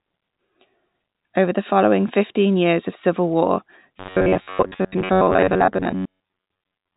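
From 3.99 s, right after "years of civil war", to 6.96 s, the speech turns into robotic sound from repeated short buffers, most likely because audio arrived too seldom and roughly two-thirds of the time was filled by looping the last fragment. Unlike a vocoder effect, the buzz stays locked at 93.8 Hz regardless of intonation, which points to about 10.7 ms buffers. The telephone-band G.711 limit near 3.8 kHz applies throughout.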